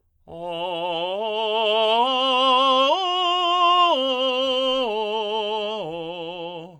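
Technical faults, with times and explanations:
No technical faults are audible anywhere in this music.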